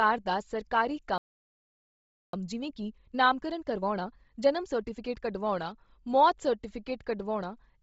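From start to finish the speech has a breathy, grainy edge, with hissy noise standing in for the upper detail. That heavy damage is likely Bluetooth LC3 compression, and it fits a low bitrate around 24 kbps with 7.5 ms frames, where the codec discards most of the upper band and fills it with noise.

Just after "ਦਾ ਸਰਕਾਰੀ", at 1.18 s, the speech cuts off mid-flow and the output stays silent for about 1.15 s until 2.33 s. This playback stall likely happened because the player ran dry of data or had its thread blocked, then resumed.

From 2.33 s to 5.33 s the speech sounds hurried, running at 1.25 times normal speed while keeping its pitch. This is time-compressed catch-up: the player works off its backlog after the stall by cutting out short pieces and cross-fading across the joins.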